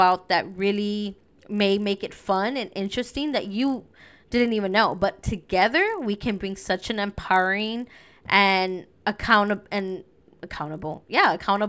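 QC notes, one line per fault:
throughout: resampler restarted on every block. A low 50 Hz buzz sits under the speech and is present only while there is signal. Each 20 ms block was converted separately, probably from 24 kHz to 16 kHz, so every block edge carries a small error.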